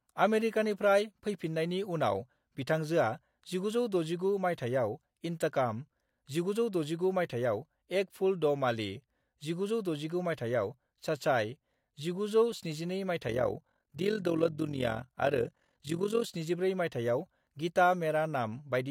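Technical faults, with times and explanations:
13.28 to 16.26 s, overlap-add ripple: the speech takes on a rough flutter, its level pumping by about 11 dB around 40 times a second, because windowed frames were rejoined with an overlap that doesn't add up to steady gain.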